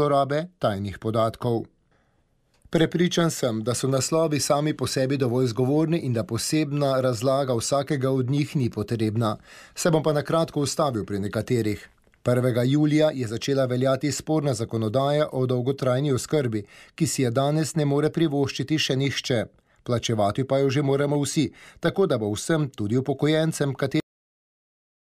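At 24.0 s the audio has a cut-off end: the final buffers never reached output, so sound stops abruptly into digital silence, shown as a flat-line waveform and blank spectrogram.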